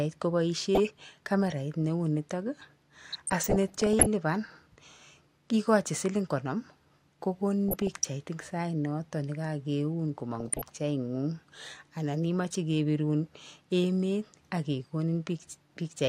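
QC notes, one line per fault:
0.75–1.13 s, 3.11–4.06 s, 7.69–8.08 s (just before "eng sainoto"), 10.35–10.62 s: DAB burbling. Burbling over the speech, because weak reception lets bit errors slip past error correction. A fraction of a percent of bits go wrong, corrupting MP2 samples, which put short noise blips in single sub-bands.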